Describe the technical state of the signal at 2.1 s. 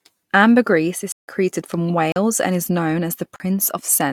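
A block of digital silence runs from 2.12 to 2.16 s: 40 ms of samples replaced by zeros, so the speech cuts out abruptly, leaving a short hole.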